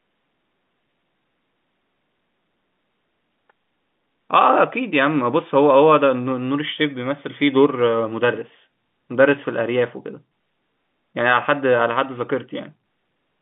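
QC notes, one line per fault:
No faults are heard in the speech. The G.711 telephone coding is audible as a narrow line band running from about 150 Hz to 3.6 kHz.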